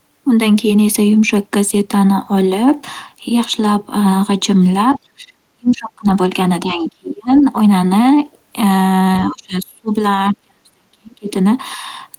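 A speech recording in which the talker's voice sinks, thins or cuts out in pieces at 4.98–6.06 s, 6.64–7.45 s, 9.2–9.91 s and 10.33–11.3 s, dropping by roughly 25 to 40 dB at worst. This is speech suppressed in double talk, likely an echo canceller ducking everything while both sides spoke. Faint scraps of a second voice, well below the talker, surface at 5.7 s and 7.34–7.45 s. This is the other side's voice leaking through, likely loudspeaker echo the canceller failed to remove.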